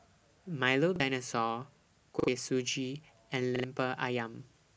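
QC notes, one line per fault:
0.96–1.00 s, repeated buffer: fresh audio arrived late, so the device replayed its last block once. A stretch of about 40 ms sounds twice with a hard join, which fits a 40 ms buffer. It is heard as a brief stutter, and roughly 40 ms of speech goes missing.
2.20–2.28 s, repeated buffer: the same underrun, longer. That block plays three times, a choppier stutter with a hard edge at each repeat and around 70 ms of speech lost.
3.56–3.64 s, repeated buffer: identical triple repeat of a 40 ms block, again a short stutter costing roughly 70 ms of speech.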